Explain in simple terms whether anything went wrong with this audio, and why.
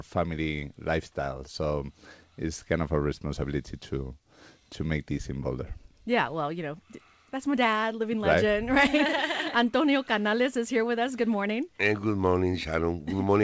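Nothing went wrong here: the sound came through an ordinary internet call connection that carries nothing above 8 kHz, so it has the slightly narrowed character of a call line, with no fault anywhere to point to.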